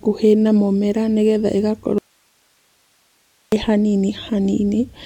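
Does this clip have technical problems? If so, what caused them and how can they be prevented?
Yes. Right after "na mũmera nĩgetha", an audio dropout to a faint residue runs from 1.98 to 3.52 s, about 1.5 s, leaving only hiss roughly 45 dB below the speech. It is not a natural pause or fade: the sound cuts off abruptly and resumes just as sharply, while the live path keeps its noise floor. The likely cause is a brief break in the signal feed ahead of the still-powered input stage. Secure and monitor cables, connectors or wireless links so the source cannot drop out mid-recording.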